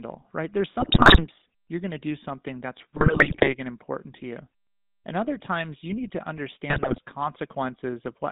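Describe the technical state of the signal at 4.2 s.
At 4.2 s the speech carries GSM full-rate codec damage, present throughout: pulse-excited vocal-tract coding gives a buzzy, gravelly roughness, band-limited to roughly 150 Hz to 3.7 kHz.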